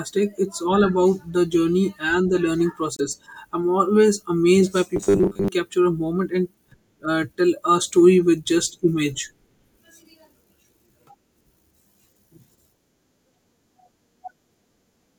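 From 2.95 to 3.01 s, between "journey and the learning" and "I'm always amazed by", a corrupt frame decoded produces a single brief glitch of energy at the wrong frequencies lasting about one frame, unlike a dropout's silence. From 4.96 to 5.48 s, between "I'm always amazed by" and "capture a moment and", the speech turns into a rigid 100 Hz metallic buzz. This is robotic sound from repeated short buffers, likely caused by roughly half the audio being replaced with repeats of a 10 ms buffer. It differs from a stutter because the pitch is fixed.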